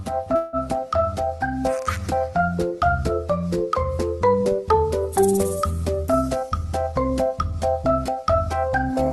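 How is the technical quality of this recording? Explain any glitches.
The recording has two glitches, one early and one near the end. It passed through a call codec that caps the top end around 12 kHz, which fits Opus at about 32 kbps.

From 0.35 to 0.56 s there is a call audio freeze. The last sound stretches into a short fading buzz for about 176 ms. Nothing is lost. The audio then resumes where it stopped, now running 176 ms later. The likely cause is delayed packets emptying the jitter buffer, so the receiver improvised until data arrived.

From 6.06 to 8.70 s there is a jitter buffer speed-up. The audio plays at 106% speed with its pitch unchanged, so it sounds slightly hurried. The buffer had built up extra delay. To shrink it, the receiver cut many tiny pitch-period slices in a row, roughly a fifth of a second in total.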